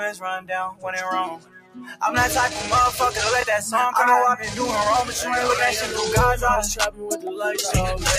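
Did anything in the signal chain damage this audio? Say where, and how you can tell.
Yes. At the call-processing stage, a speech-tuned noise suppressor was left running on material it wasn't built for: a noise suppressor applied to music or sounds. It treats sustained tones, ambience and reverberant tails as background noise and keeps pulling the gain down. Across the whole clip the level swings by around 10 dB. Onsets punch through while held parts and decays sag, giving a pumping, thinned-out quality.

That same suppressor produces distinct episodes of sound cut by the noise suppressor, where it clamps down harder than its usual swing: 0.12–0.51 s (about 15 dB deep), 0.71–0.87 s (about 18 dB), 1.26–2.02 s (about 18 dB, the longest) and 6.91–7.27 s (about 13 dB). In each, the steady or fading content sinks or has its tail chopped short. Transients in those spans survive largely intact.

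On the wireless link, two short Bluetooth stutters sit at 3.42–3.44 s and 5.89–5.91 s. In each, about 21 ms of audio went missing, which fits a single lost packet. The receiver filled the gap by repeating its last buffered slice, so you hear a brief glitchy repeat. The signal then picks up further along, as though it had continued underneath.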